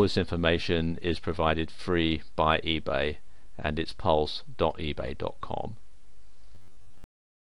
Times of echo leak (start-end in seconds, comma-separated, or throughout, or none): none